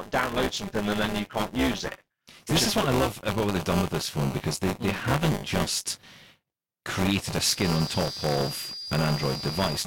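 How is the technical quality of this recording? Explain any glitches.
The recording has three technical faults: a continuous buzz, a late whistle, and one brief skip.

Buffer tearing runs throughout as a robotic 200 Hz buzz under the speech. Each roughly 5 ms period carries a small slice of audio from about 20 ms earlier, joined hard on both sides.

A feedback whistle enters at 7.47 s, just after "created a", and lasts to the end. It is a thin, slowly swelling and fading 4.8 kHz tone about 10 dB below the speech, likely from a loudspeaker-to-microphone loop held at the edge of feedback.

Compressed frames are skipped from 7.93 to 7.95 s. About one frame, roughly 20 ms of audio, is dropped, and the audio jumps ahead at that point.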